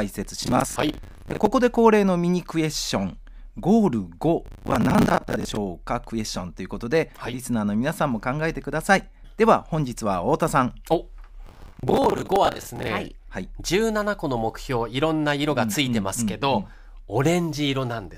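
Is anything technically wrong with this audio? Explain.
Yes, there's processor overload crackle in three bursts: 0.43 to 1.47 s, 4.46 to 5.57 s, and 11.47 to 12.88 s. The processor is falling behind on small buffers, each around 10 ms, and dozens of deadlines get missed in a row. Each missed buffer replays a scrap of old audio with hard edges, so the speech picks up a gritty, tearing crackle that clears once the load drops.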